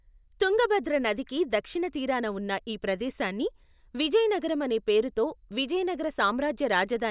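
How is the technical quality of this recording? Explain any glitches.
No technical faults can be heard in the recording, and the signal stays steady and continuous throughout.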